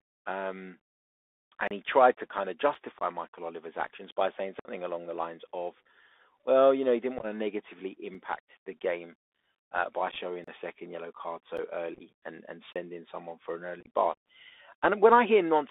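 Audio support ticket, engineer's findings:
Narrowband throughout, nothing above roughly 3.6 kHz or below 300 Hz. Bluetooth CVSD headset codec at 64 kbps, 1-bit delta with adaptive step. Step lags on loud high content: scratchy sibilants, granular hiss under the speech, audible distortion.

Hard dropouts to digital silence. Blocks of digital silence at 1.68–1.71 s, 10.44–10.48 s and 12.73–12.76 s (32 ms each), plus ticks at 2.75 s, 8.15 s and 11.57 s. The 11.57 s gap fits a 512-sample buffer, so the likely cause is output buffer underrun.

Abrupt holes and chopped, crackly speech. Unconcealed Bluetooth headset packet loss at 2.99 s (18.8 ms) and 4.59–4.68 s (56 ms, around fifteen packets). Scattered losses at 7.19–7.25 s, 10.11–10.17 s, 11.94–12.02 s and 13.80–13.87 s (up to 45 ms lost). Lost headset packets get replaced by silence or an idle pattern with no concealment.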